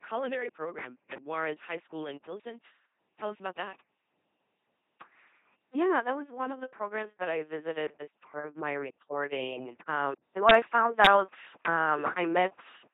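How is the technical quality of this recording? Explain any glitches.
Pretty rough, honestly. The whole thing runs through an LPC-10 vocoder, and near the end there's an input switch to a poorer device.

LPC-10 vocoder, whole clip: the speech comes out buzzy and robotic, with nothing above 3.9 kHz. That's the signature of a tiny all-pole vocal tract model fed by either a pulse train or noise, with each frame forced to be fully voiced or fully unvoiced. The heavy damage, with mechanical buzz and stray hiss where voicing gets misjudged, fits LPC-10 at 2.4 kbit/s.

Input switched to a poorer device, 10.15 s to the end: right after "part of my reporting" there's about a 200 ms dropout. Then the level shifts by roughly 5 dB, and a faint new noise floor comes in, quite far below the speech. This is likely a mid-recording switch to a different mic or a headset call profile. That device has its own gain and noise.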